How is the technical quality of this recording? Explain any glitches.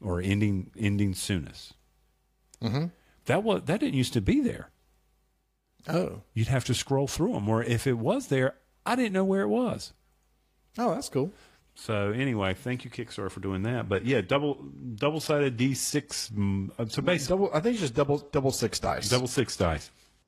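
The recording has one fault, in its final stretch. From 13.84 s, just after "for doing", to the end, the adaptive stream dropped to a lower bitrate. A slowed connection forced a much leaner encoding, which fits a switch from 96 kbit/s AAC-LC to 16 kbit/s HE-AAC. Nothing survives above 12.3 kHz, the treble turns synthetic, and codec artefacts rise. The change is sudden, with no gap.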